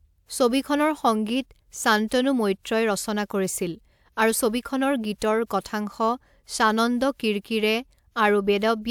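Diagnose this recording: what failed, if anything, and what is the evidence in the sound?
Nothing in the recording points to a failure at any stage of the chain. The speech carries no audible defect that would need a diagnosis.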